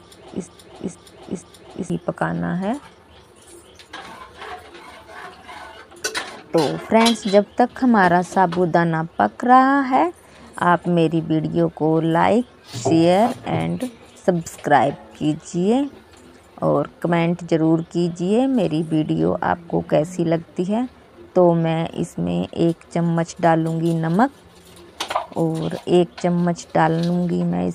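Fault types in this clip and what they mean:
Broken-record loop: The clip begins already stuck in a loop. A fragment of 0.47 s plays, then plays again exactly, back to back. It repeats three times before the loop breaks at 1.90 s. The cause is likely a player, encoder or stream that stalled and kept resending the last fragment it held. The sound that belonged in that opening stretch is lost. Nothing new is heard until the repeats end.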